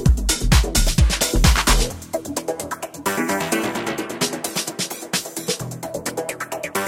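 No technical faults are audible.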